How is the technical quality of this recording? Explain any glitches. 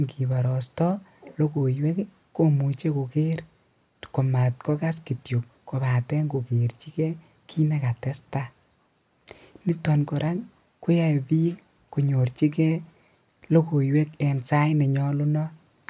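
No glitches to report: the speech recording carries no audible technical faults at any point.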